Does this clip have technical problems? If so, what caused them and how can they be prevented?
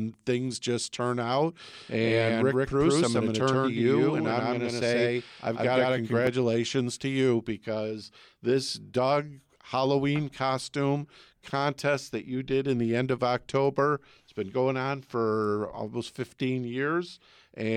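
Yes. A doubled audio track runs from 1.73 to 6.27 s, starting right after "things just turn out": an equally loud, dry second copy trails by about 150 ms and cuts in and out abruptly, likely from the same signal being captured again through a slower path. Monitor inputs so each source reaches the mix only once.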